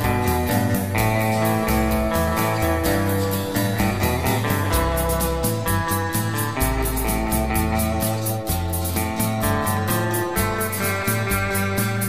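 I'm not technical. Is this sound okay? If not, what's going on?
No. A click repeats every 1.25 s from 1.02 to 11.02 s. These are likely clock drift buffer slips between two mismatched device clocks.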